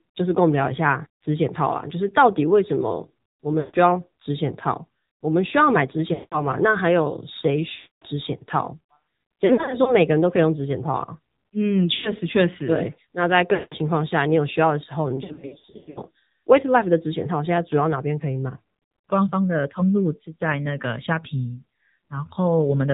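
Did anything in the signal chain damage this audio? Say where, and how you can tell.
Yes. At the codec stage, an AMR narrowband mobile codec at a bitrate around 7.4 kbps cuts everything above 4 kHz and adds a buzzy, synthetic quality. That buzz is what sets it apart from a simple low-pass filter.

At the network stage, lost AMR speech frames stretch the sound and fade it out at 3.60, 6.14, 7.76, 11.94 and 13.54 s. Scattered losses run from 9.46 to 9.95 s and from 15.16 to 16.02 s. These decay smoothly, unlike hard dropouts.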